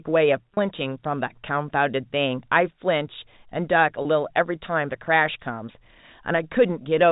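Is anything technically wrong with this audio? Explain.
Yes. Packet loss with pitch repetition at 0.54 s and 4.02 s: each 30 ms gap is bridged with the last pitch period, a buzzy hold instead of silence.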